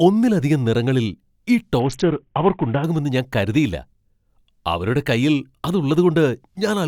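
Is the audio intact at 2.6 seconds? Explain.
No. A Bluetooth SBC bit pool drop runs from 1.80 to 2.84 s, between "ഒന്നിലധികം നിറങ്ങളിൽ ഈ" and "ഞാൻ കരുതിയില്ല". Link congestion forced the encoder to spend far fewer bits per frame. The sound points to a fall from a bit pool near 28 to about 5, roughly 54 kbps. The highest sub-bands receive almost nothing and the rest are coarsely quantised, so at 2.6 s the speech sounds muffled and gritty until the rate recovers.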